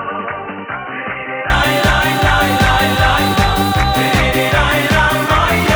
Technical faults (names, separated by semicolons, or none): input switched to a poorer device